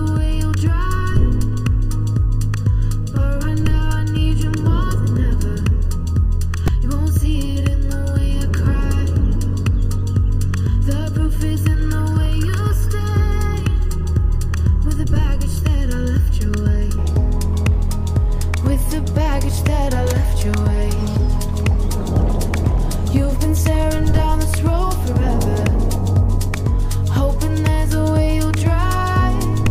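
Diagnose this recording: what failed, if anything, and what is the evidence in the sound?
A channel delay (comb filtering) fault sits in the analogue wiring or converter stage. From 0.0 to 17.0 s the sound is hollow and phasey. Fixed notches begin around 700 Hz and repeat at odd multiples, about 1.4 kHz apart. That spacing points to one channel running late by under a millisecond before the two are summed to mono. Content common to both channels cancels at those frequencies. After 17.0 s the hollowness is gone.

A repeated buffer fault occurs at the driver or buffer stage. There are two brief buzzy clicks, at 6.68 s and 21.60 s. Each repeats a piece about 2.7 ms long, which fits a 128-sample buffer. At 6.68 s the piece plays two extra times. At 21.60 s it plays once more. Fresh audio arrived late, so the device replayed the last buffer with hard joins. A few milliseconds of real audio are lost each time.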